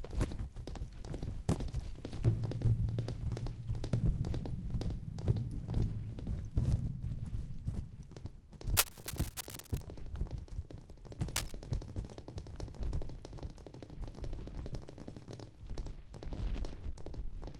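At 8.77 s a burst of cable scratch noise begins and runs to 9.81 s, about a second of dense, uneven scratching laid over the sound. A shorter burst follows from 11.36 to 11.52 s. Both sit at roughly the same level as the sound itself. The likely cause is a worn cable, connector or control carrying DC being moved, so its contact resistance jumps about and injects irregular noise into the signal.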